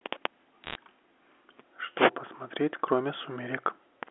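From 0.64 to 0.75 s, bit errors on a digital phone line put a burst of sharp ticks over the speech, consistent with under one percent of bits flipped. Each flip spoils one sample, so unlike packet loss nothing drops out. The speech underneath continues intact.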